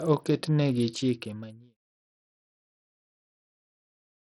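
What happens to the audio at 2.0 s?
At 2.0 s the speech has already faded out, a smooth fade that finished at 1.78 s, so the waveform there sits near the baseline. The heavy damage from Bluetooth SBC compression, likely the cause and running through the whole clip, is what shapes the sound. Its few wide sub-bands get too little bit budget, which fits a rate around 64 kbps, so the upper bands are starved and the rest are coarsely quantised. Treble flickers and a gritty, aliased hiss rides on the sound. On a spectrogram the energy is patchy and blocky in the highs, and nothing appears above 16.6 kHz.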